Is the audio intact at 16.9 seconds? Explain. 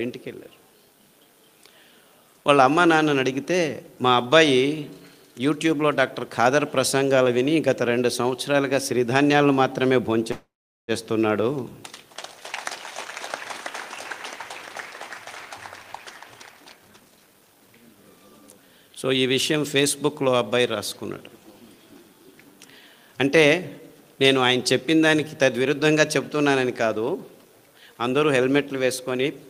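No. A jitter buffer speed-up runs from 15.26 to 18.17 s and covers that moment. The receiver's buffer had built up more audio than its target, so to bring the delay back down it repeatedly cut out short slices of one or a few pitch periods. Across the span this removes about half a second, and playback runs at 120% speed. The pitch stays unchanged, but the sound comes across as rushed and hurried.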